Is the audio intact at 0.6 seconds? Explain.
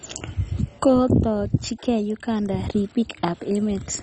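No. At 0.6 seconds the speech carries heavy MP2 compression damage, present from start to end, and the likely cause is MPEG Layer II coding at a very low rate, which fits about 32 kbps. The encoder splits the sound into 32 sub-bands and, short of bits, shuts off the upper ones, so nothing is heard above about 10.2 kHz. The remaining bands are coarsely quantised and flicker, giving a dull, gurgling, granular texture.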